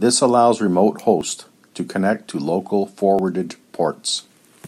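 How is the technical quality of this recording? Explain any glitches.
There are two small skips in the speech. At 1.21 s, right after "allows remote" and just before "to connect to local", and again at 3.19 s, after "to connect to local", a sliver of around 20 ms goes missing. It's likely audio missing between chunks: the recorder works in 2.0 s blocks and drops a bit at each handover, so the edges butt together with a quick jump.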